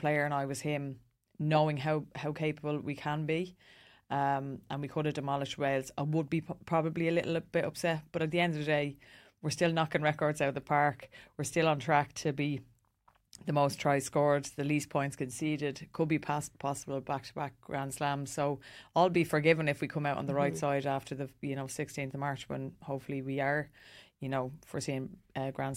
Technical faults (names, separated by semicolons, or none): none